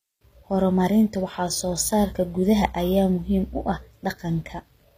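Throughout the speech, s sounds turn gritty and metallic, and nothing lies above 15.5 kHz. This is likely HE-AAC compression, consistent with a bitrate near 24 kbps. Only the lower band is coded. The highs are copied up from it, so their harmonics misalign.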